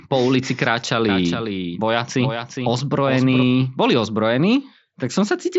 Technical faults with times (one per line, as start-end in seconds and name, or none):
1.09-3.43 doubled audio track